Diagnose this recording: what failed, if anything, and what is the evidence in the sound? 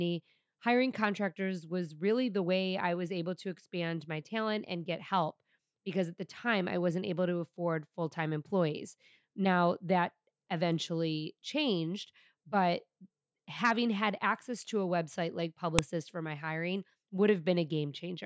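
A WAV header was left in place where two files were joined, so its bytes were played as audio samples. This is a storage-stage fault. In this speech clip it produces a single sharp, loud click at 15.79 s, marking where the second piece begins.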